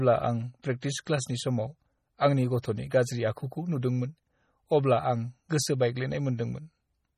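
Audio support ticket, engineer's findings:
Watery, swirly texture throughout, treble gone above 14.4 kHz; likely heavy MP3 compression, consistent with a very low bitrate around 32 kbps, weak frequency lines dropping in and out.

Brief hiss ahead of attacks at 0.62, 0.81 and 2.62 s, about 18 to 19 ms each; pre-echo, codec noise smeared into the quiet before each onset.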